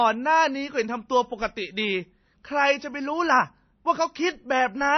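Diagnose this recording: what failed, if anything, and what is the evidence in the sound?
The damage sits at the codec stage and runs through the whole speech clip: a hard ceiling at 6.1 kHz, with nothing above it, and a plainly audible watery, swirling quality in the remaining band, likely from MP3 compression at a low bitrate of about 26 kbps. Short of bits, the encoder chops the treble at a fixed line and drops weak frequency lines frame by frame. A spectrogram shows a flat cutoff and flickering holes beneath it.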